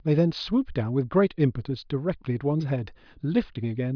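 No technical faults are audible anywhere in this speech recording.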